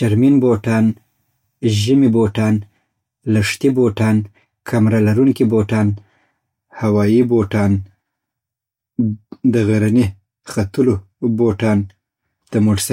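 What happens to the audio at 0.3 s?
Nothing goes wrong at 0.3 s; the audio plays through that moment intact, with no dropout, click or distortion.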